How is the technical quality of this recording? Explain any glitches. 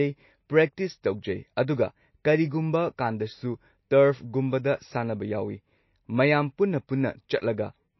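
The recording has one audible problem, present from start to finish: plainly audible codec damage, most likely from MP3 compression.

Throughout the clip, nothing is heard above about 5.8 kHz, and the speech has a watery, swirling quality, with sibilants turning chirpy and attacks smeared. The encoder was likely starved of bits, fitting a rate near 27 kbps, so it dropped weak frequency lines frame by frame and cut the treble. A simple low-pass filter would dull the top the same way but leave no swirl or chirps.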